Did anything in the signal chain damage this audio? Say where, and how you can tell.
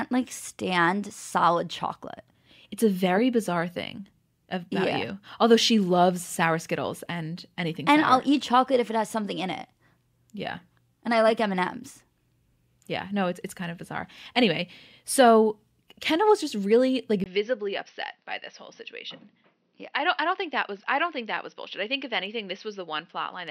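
Yes: the input switched to a poorer device at 17.24 s, right after "was just really like", and stays switched to the end. A 20 ms gap opens the section. After it the sound is duller and a few dB quieter, with a narrower band and a faint new noise floor. The cause is likely the driver handing capture to a narrower-band microphone.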